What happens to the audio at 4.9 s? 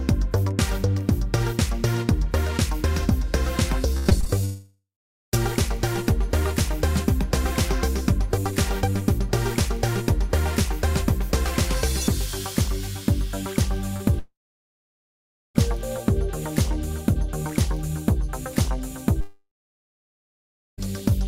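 A long network dropout covers 4.45 to 5.35 s. Incoming audio likely stopped for about 0.88 s, so the receiver extended the last sound as a fading buzz or hiss, then left about 0.47 s of silence before audio resumed with that stretch missing.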